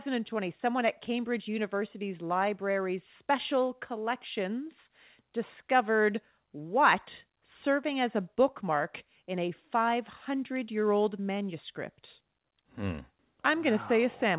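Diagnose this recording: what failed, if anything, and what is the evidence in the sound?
Nothing failed; no fault is audible in this recording.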